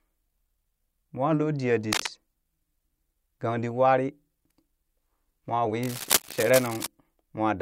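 Cable scratch noise at 1.93 to 2.10 s and 5.83 to 6.87 s: rough, uneven scratching only slightly below the speech, likely from a worn cable or connector being moved.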